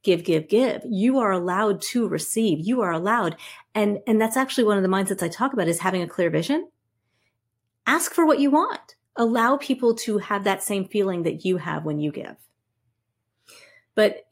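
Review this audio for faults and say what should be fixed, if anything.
Nothing stood out on listening to this speech, so there is nothing here that needs fixing.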